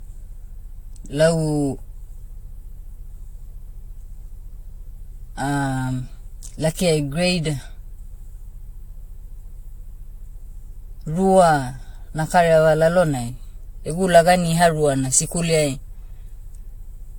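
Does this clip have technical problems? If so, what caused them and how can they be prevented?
Yes. Generation loss runs through the whole clip. The speech sounds swirly and hollow, with smeared consonant attacks and nothing above 19 kHz. That is more damage than one lossy pass at a moderate rate would cause. The likely cause is repeated lossy encoding, around seven rounds of an AAC-type codec near 96 kbit/s. Each round quantised again on a shifted frame grid, so noise piled up. To prevent it, keep a lossless master and encode to a lossy format only once, at the end.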